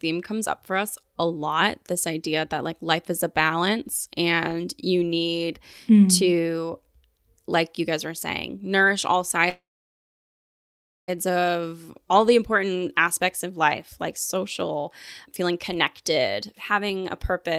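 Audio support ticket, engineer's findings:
Call audio freeze, 9.49 to 11.10 s: last sound held as a fading buzz or hiss, then about 1.45 s of silence. Packets likely delayed, so the jitter buffer ran dry. Playback resumes where it stopped, nothing lost, latency up about 1.6 s.

Jitter buffer speed-up, 16.02 to 17.54 s: speech runs about 5% fast at unchanged pitch and sounds slightly hurried. The receiver is trimming excess buffered delay by cutting pitch-period-sized pieces, roughly 70 ms removed in total.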